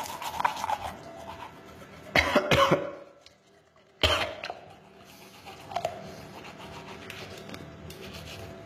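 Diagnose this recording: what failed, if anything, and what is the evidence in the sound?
HE-AAC compression runs through the whole clip, most likely introduced at the codec stage. The damage is plainly audible: the treble is bright but synthetic, rebuilt by copying lower bands upward instead of being coded directly. That is consistent with a bitrate near 20 kbps.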